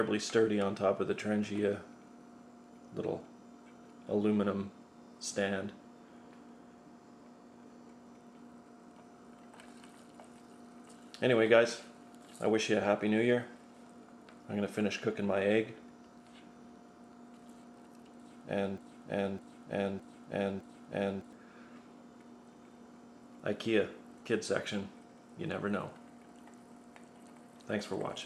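From 18.78 to 21.33 s, a broken-record loop repeats a 0.61 s fragment exactly four times, back to back, and the audio due in that span is lost. Unlike an echo, the copies neither fade nor overlap. A stalled player or stream likely kept resending its last fragment.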